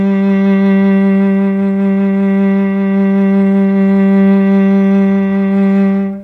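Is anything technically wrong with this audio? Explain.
No, nothing stood out as a technical problem on listening to this music.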